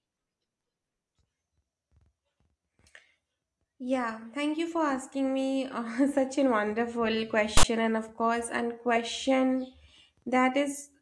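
At 7.57 s the speech is cut by a burst of static lasting until 7.64 s, about 70 ms. This is file tags played as audio. A block of text metadata, followed by zero padding, has been decoded as if it were sample data. The text bytes give a loud, harsh rasp. The padding then reads as dead silence. Both edges are abrupt, with no fade in or out.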